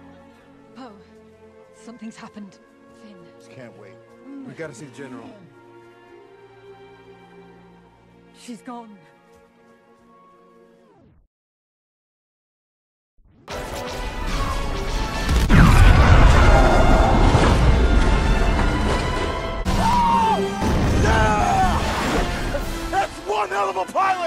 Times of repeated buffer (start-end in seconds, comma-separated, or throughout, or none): 19.93